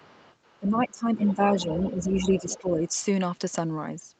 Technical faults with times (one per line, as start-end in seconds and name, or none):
0.00-0.59 other side's voice leaking through
0.60-2.85 speech suppressed in double talk
1.24-1.34 other side's voice leaking through
1.60-2.58 other side's voice leaking through